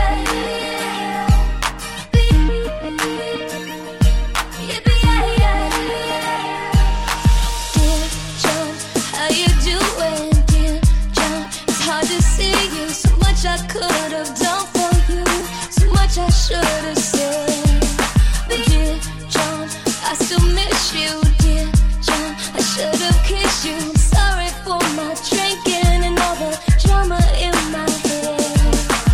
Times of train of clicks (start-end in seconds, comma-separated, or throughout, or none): none